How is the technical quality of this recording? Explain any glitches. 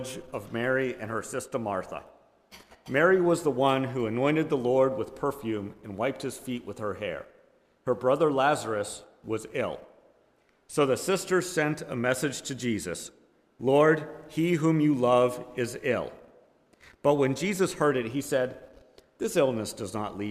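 No glitches or technical faults can be heard anywhere.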